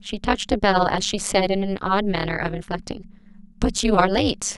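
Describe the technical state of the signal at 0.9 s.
Overlap-add ripple is present at 0.9 s, as it is across the whole clip. Frames were rejoined with overlaps that don't sum to a constant gain, so the level dips by about 60 dB once per frame, around 200 times a second, giving the speech a metallic buzz with extra tones around each note.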